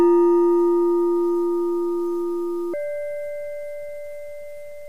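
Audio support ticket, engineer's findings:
Section at the wrong speed, 2.74 s to end: sound jumps about 1.69x faster, pitch up roughly ten semitones. Likely playback or edit clocked at the wrong rate. Unlike a pitch shifter, timing compresses along with pitch, so events arrive hurried.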